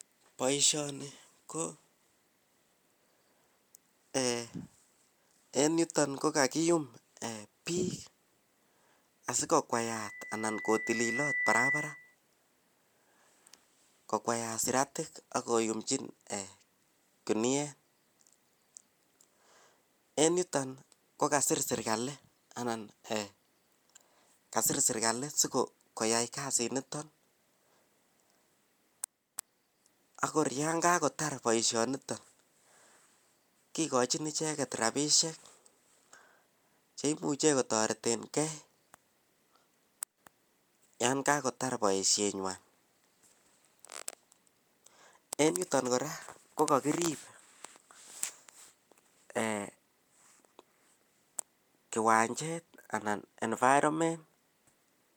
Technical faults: loudspeaker feedback squeal

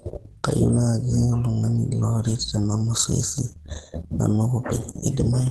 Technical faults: Opus compression

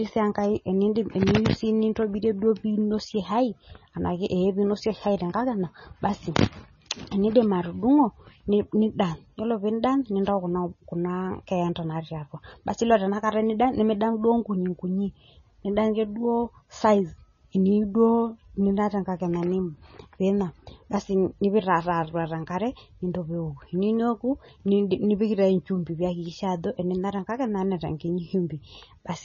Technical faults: MP3 compression

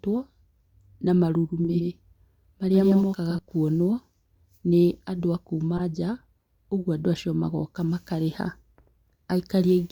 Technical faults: doubled audio track; corrupt frame decoded

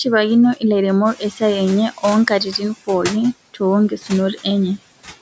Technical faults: noise suppressor artifacts; noise suppressor catching up; speech cut by the noise suppressor

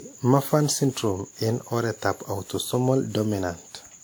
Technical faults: generation loss

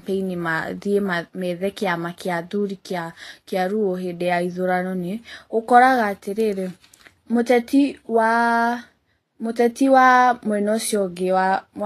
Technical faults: Vorbis compression

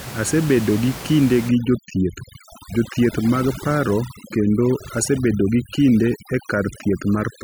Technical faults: overdone noise removal

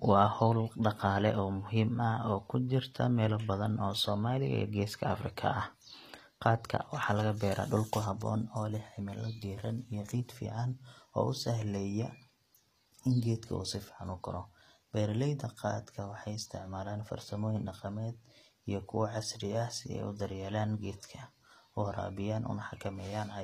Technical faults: HE-AAC compression

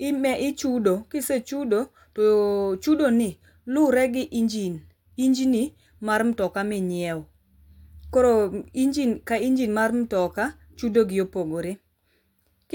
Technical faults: none

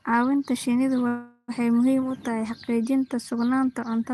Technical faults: call audio freeze

